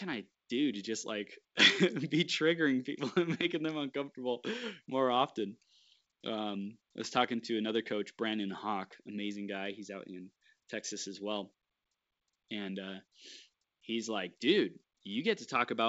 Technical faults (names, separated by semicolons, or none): none